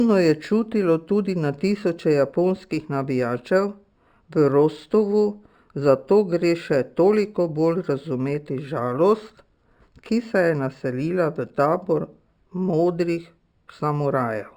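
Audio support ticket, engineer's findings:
Imaging from linear upsampling throughout: dull top, faint metallic shimmer on sibilants. Spectrogram shows a weak mirrored copy at 6 to 12 kHz, roughly 35 dB down. Fits 12 kHz audio raised to 44.1 kHz.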